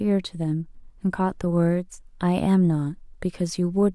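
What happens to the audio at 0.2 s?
Nothing goes wrong at 0.2 s; the speech there plays through intact, with no dropout, click or distortion.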